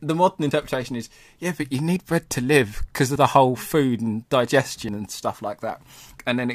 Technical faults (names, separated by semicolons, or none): dropped buffer (overrun)